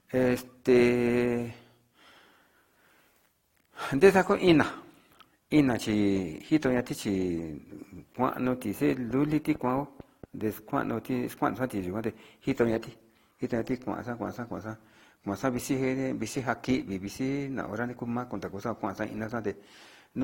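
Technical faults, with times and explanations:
Throughout: transcoding between lossy codecs. Nothing above 16.6 kHz, and layered smearing and swirl fit a low-rate Opus stage likely followed by AAC-LC re-encoding.
9.11–10.25 s: train of clicks. About seven evenly spaced clicks at 4.4 per second, peaking about 5 dB over the speech, likely from equipment interference or a faulty connection.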